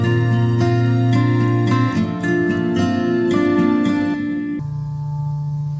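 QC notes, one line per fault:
4.59–5.79 s: wrong sample rate. The last stretch plays at half speed and drops a full octave, about 12 semitones lower. Samples captured at 32 kHz are read out at 16 kHz with no conversion. Time stretches and pitch falls together, so the sound turns low and slow.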